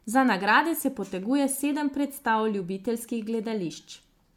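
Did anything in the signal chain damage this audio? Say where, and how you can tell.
Yes, at the codec stage: generation loss runs through the whole speech clip. Sound extends to 20 kHz, fitting a decent MP3 rate near 128 kbit/s, yet it swirls, smears and sounds hollow, with blurred attacks. A single low-bitrate pass would cut the highs instead, so this is likely around seven re-encodes stacking artefacts.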